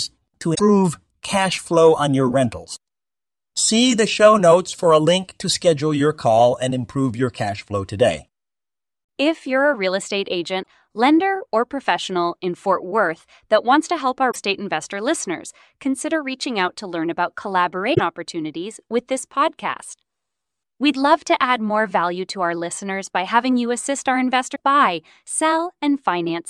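Speech, with five brief glitches that are likely a broken MP3 bit reservoir. When stretches of the stream went missing, the frames that followed looked back for their borrowed data and decoded bytes belonging to other frames. Each time, the audio jumps ahead through a short damaged stretch, at 0.54–0.60 s, 10.62–10.65 s, 14.30–14.36 s, 17.93–18.00 s and 24.54–24.56 s. Their lengths run from under one to nearly three MP3 frames of about 26 ms.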